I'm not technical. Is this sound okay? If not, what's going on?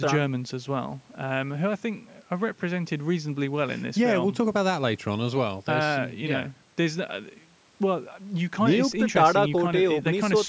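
Yes, nothing stood out as a problem when listening to this speech recording, which sounds like it came through a normal call microphone.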